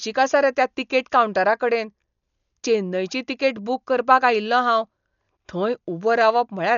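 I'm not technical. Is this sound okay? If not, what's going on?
No. Throughout, the speech sounds dull, with nothing above about 6.9 kHz and a rough, fluttering hiss, likely from heavy Dolby Digital compression discarding detail.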